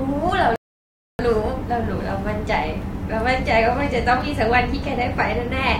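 A rebuffering stall interrupts this speech clip: the player's buffer ran dry and playback halted until more audio arrived. At 0.56 s the sound drops to silence, then resumes at 1.19 s exactly where it left off, losing nothing but adding about 0.63 s.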